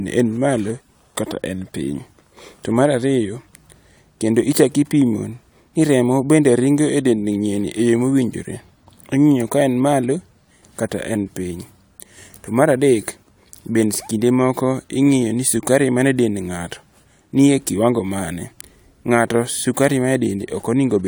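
Speech recording with no audible technical faults: no dropouts, clipping, glitches or level jumps anywhere in the clip.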